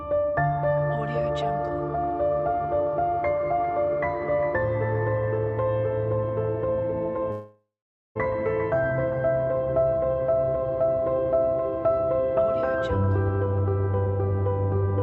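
A long network dropout runs from 7.31 to 8.17 s in this audio, which has passed through a call codec whose top end stops around 8 kHz, consistent with Opus. Across that stretch the receiver keeps extending the last sound it had as a fading buzz, and for roughly half a second of it only silence remains. The audio then resumes with that portion missing. The likely cause is a run of lost packets that the jitter buffer had to conceal.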